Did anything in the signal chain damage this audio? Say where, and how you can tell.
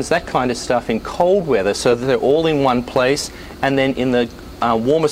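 No, nothing in the signal chain stood out as damaging this audio on listening.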